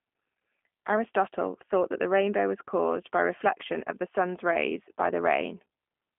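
Throughout, the speech passes through a G.729 codec, likely around 8 kbit/s, modelling the voice from coarse pulses within a 200 Hz to 3.4 kHz line band, leaving it thin, rough and synthetic, with nothing above 3.5 kHz.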